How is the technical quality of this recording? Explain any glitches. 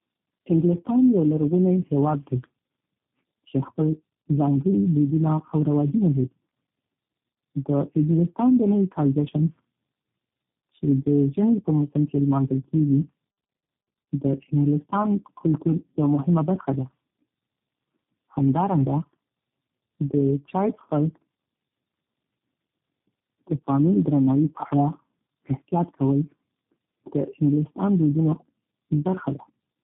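The recording is degraded throughout by one fault: tandem speech coding. For the whole clip, the speech sounds like it passed through several low-rate speech codecs in sequence, each one encoding the already damaged output of the one before. The result is rough, muffled and warbly speech, with nothing above 3.8 kHz. The character fits about three lossy coders in a row, the last resembling G.729A, with compounding artefacts.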